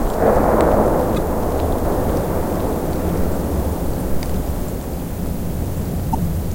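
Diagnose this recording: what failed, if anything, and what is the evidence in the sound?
The codec stage failed: damaged data in a compressed stream. Three brief disruptions break in at 1.14–1.18 s, 3.97–4.01 s and 6.13–6.15 s, each lasting 24 to 40 ms. Where bytes in the stream are corrupt, the decoder misreads those frames and rebuilds nonsense spectral content until it finds the next valid frame header and resynchronises. A buffer underrun or network dropout would instead leave a gap of silence or a repeated fragment, not a short corrupted-frame glitch.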